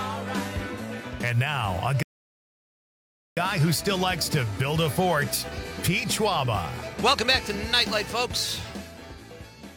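A rebuffering stall interrupts the audio from 2.03 to 3.37 s. Playback drops to silence for about 1.34 s and then picks up exactly where it left off. The player had exhausted its downloaded audio and waited for more to arrive. Nothing is skipped, but the gap adds that time to the clip.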